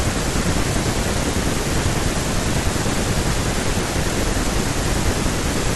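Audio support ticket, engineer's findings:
Chunks out of order at 1.70–1.73 s and 4.14–4.16 s: 10 ms block played two, then one, slots late. Brief jumble at three hard joins, no missing audio, unlike a dropout. Buffer/reassembly ordering.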